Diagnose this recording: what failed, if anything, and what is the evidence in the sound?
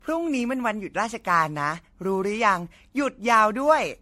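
The codec stage failed. Throughout the speech, the sound is swirly, smeared and hollow, and attacks blur. Nothing is present above 16.2 kHz. This is generation loss, likely from around seven MP3 passes. Each pass re-quantised on a shifted frame grid.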